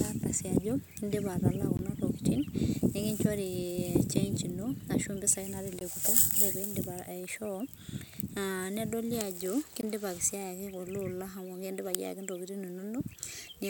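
At 1.77, 5.79 and 9.81 seconds, the speech stops for 20 ms. This is a gap between chunks. The audio arrived in 4-second chunks, and silence was inserted at each join. Nothing is lost. The flow is just briefly broken.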